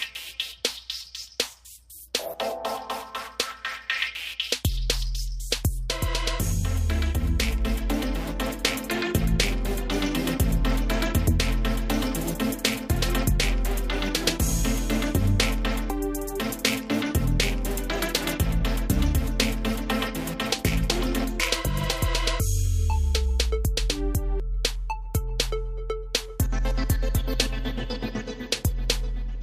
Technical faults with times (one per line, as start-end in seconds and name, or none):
20.91-21.21 loose connector crackle